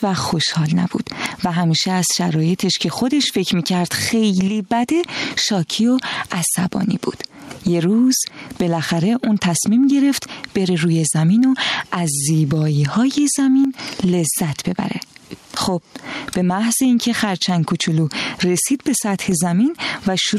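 Gain pumping runs through the whole clip: the input gain is likely set far too high, so a fast limiter keeps clamping down on every loud sound. The gain swings by around 15 dB, leaving the dynamics flattened and squashed.

From 4.48 s to 5.31 s, and again briefly from 13.65 s to 13.79 s, one channel drops out, likely a lost stereo channel before the mono sum. Shared content falls abruptly by about 6 dB, and anything carried only in that channel vanishes.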